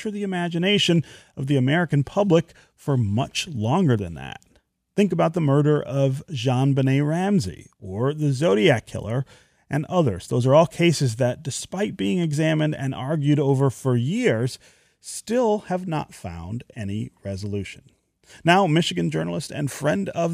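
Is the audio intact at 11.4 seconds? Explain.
Yes, at 11.4 seconds the speech plays through cleanly, with no dropout, click, distortion or other technical fault at that moment.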